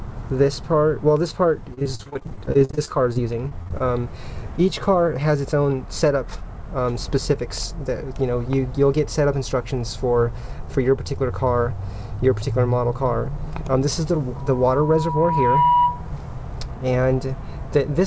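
From 1.74 to 3.82 s the sound turns choppy and robotic. This is repeated packet loss: 24 gaps, the longest 42 ms, were each patched by stretching the previous sound.

At 14.36 s a steady 973 Hz tone swells over about one and a half seconds into a squeal that ends at 16.07 s, a few decibels above the program. This is loudspeaker feedback: the microphone re-amplified its own loudspeaker output at that frequency.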